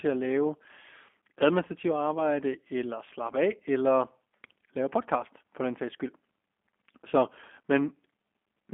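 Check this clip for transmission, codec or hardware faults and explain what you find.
Two faults are present.

The G.729 codec affects the whole speech clip. It runs at 8 kbit/s and rebuilds speech from a vocal tract filter, a pitch predictor and a few pulses per frame. The line band is about 250 Hz to 3.4 kHz. The result sounds plainly rough and synthetic.

VoIP packet loss concealed by the speech codec occurs from 2.15 to 2.19 s, just before "eller slappe af eller". The gap fits one lost 10 ms frame. The decoder extends the previous pitch and filter, so the sound briefly smears and weakens before recovering.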